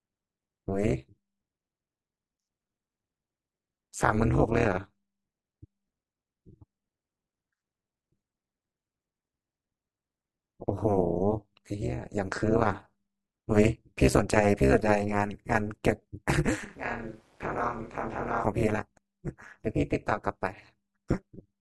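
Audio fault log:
throughout, overlap-add ripple: a harsh, metallic buzz with extra tones around each note over all of the speech, the level rising and collapsing about 200 times a second by about 60 dB, because the windowed frames were rejoined with an overlap whose gains never sum to a constant level.
16.65 to 18.44 s, switch to a distant microphone: the voice abruptly turns hollow and roomy, thinner in the bass and about 10 dB quieter, with room noise about 30 dB below the speech, then snaps back; likely the close microphone dropped out and a farther one covered.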